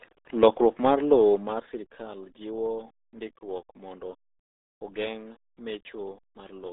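Throughout, the speech sounds muffled and gargly, boxed into a narrow band of roughly 250 Hz to 3.7 kHz with nothing above 3.8 kHz. This is RealAudio 14.4 codec damage: heavy low-rate coding that fits an 8 kbit/s dial-up stream.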